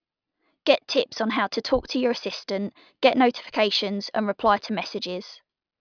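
Listening to this speech recording, nothing technical stood out.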